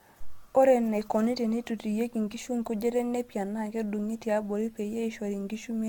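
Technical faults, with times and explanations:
Throughout, generation loss: the speech sounds swirly and hollow, with smeared consonant attacks and nothing above 17 kHz. This is likely the result of repeated lossy coding, around five passes, in a way that fits an AAC-LC chain at 96 kbit/s. Each re-encode quantises the signal again on a shifted frame grid, so noise and spectral gaps accumulate instead of cancelling. The result is more washed and phasey than a single pass at that bitrate would give.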